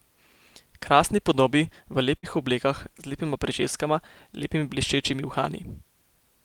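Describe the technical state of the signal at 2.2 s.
At 2.2 s there's a burst of packet loss, running from about 2.17 to 2.26 s, right after "podobi v" and just before "oblekah z". A short run of audio never arrived in time, so the receiver stretched the last sound it had for roughly 54 ms and faded it down. Playback then picks up about 60 ms further on, so that slice of speech is simply gone.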